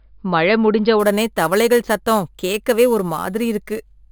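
From 1.0 s to the end, the speech carries imaging from sample-and-hold upsampling. Each sample was repeated without a smoothing filter, which points to an original rate near 11 kHz. Mirrored copies of the speech spectrum fill roughly 5.5 to 11 kHz at about 18 dB below the signal, heard as a bright metallic fizz that rises and falls with the speech. On a spectrogram, the upper band mirrors the lower harmonics and moves opposite to them; the waveform shows small staircase steps.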